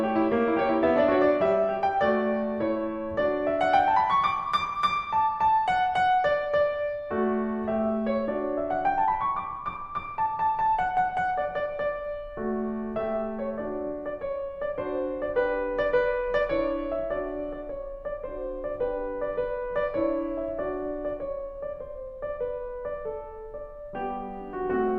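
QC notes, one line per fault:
No fault found in this music clip.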